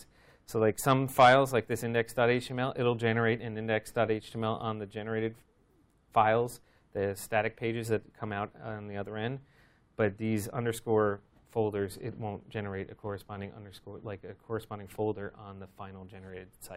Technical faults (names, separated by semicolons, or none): none